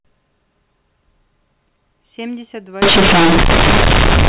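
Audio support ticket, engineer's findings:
Very loud, buzzy distortion from 2.82 s to end of clip at 4.29 s. Heavy noise in pauses. Companded audio read as linear. A-law bytes output as plain 8-bit samples, no expansion. Each sign change swings half of full range. Quiet speech as large as loud speech. Earlier audio carries G.711 A-law telephone band-limiting at 4 kHz.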